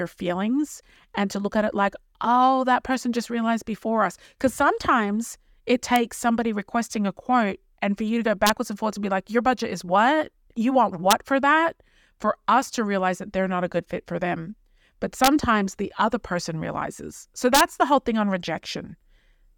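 Speech clip with integer overflow: peaks pushed about 0 to 1 dB past the integer limit wrapped to the opposite sign instead of being limited, giving sharp cracks at 5.96 s, 8.47–8.49 s, 11.11 s, 15.24–15.28 s and 17.55–17.61 s, the last just before "the whole thing on".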